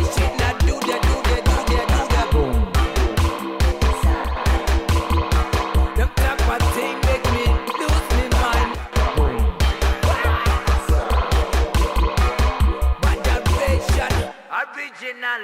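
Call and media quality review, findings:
Sudden gain jump at 4.24–4.37 s and 8.74–8.93 s. Sound and background noise step down together, about 6 dB then about 12 dB. Likely an unramped digital gain change.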